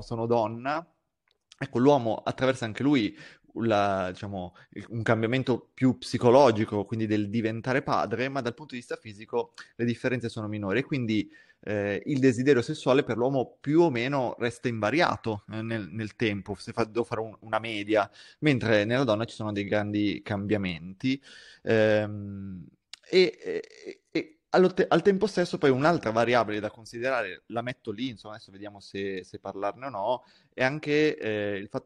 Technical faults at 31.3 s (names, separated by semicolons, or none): none